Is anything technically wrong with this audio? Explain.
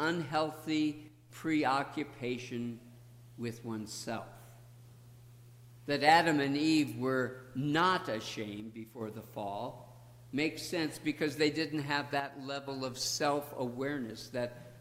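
Yes. There are three short, abrupt level drops of about 6 dB, at 1.08 to 1.30 s, 8.60 to 9.01 s and 12.20 to 12.68 s, each recovering just as suddenly. The likely cause is one channel drops out: one side of the stereo pair goes silent, so after mono summing the content shared by both channels loses half its contribution. The sound dips briefly, and anything carried only on the missing side vanishes.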